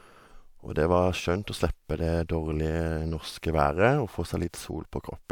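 Nothing goes wrong anywhere in this bit of speech, so there's really no fault to point out at any moment.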